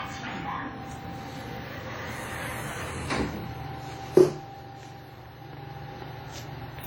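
From start to end, a block size mismatch (truncated) adds a steady 43.1 Hz buzz, which fits 1024-sample blocks having their tails cut. Unlike random dropouts, it repeats evenly, and the speed is unchanged.

Also throughout, nothing is heard above 18.4 kHz, and two distinct kinds of codec smearing sit together rather than one, likely from transcoding between lossy codecs, which points to an older WMA stage followed by HE-AAC.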